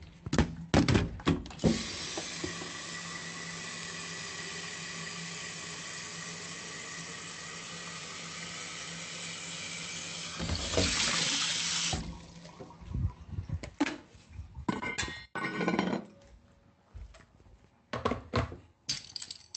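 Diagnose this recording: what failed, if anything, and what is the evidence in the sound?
Nothing in these everyday sounds points to a failure: the audio shows the character of a normally working WebRTC call path, with the codec's usual coding texture and high frequencies rolled off above about 8 kHz, which fits Opus at a moderate bitrate of around 40 kbps.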